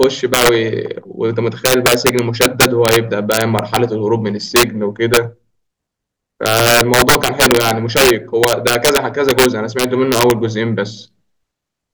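Integer overflow runs throughout this speech: pushed about 5 dB too hot, peaks wrap to the opposite sign, producing violent cracks rather than clipping's flattened buzz.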